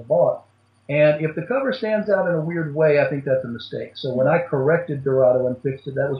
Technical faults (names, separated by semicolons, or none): none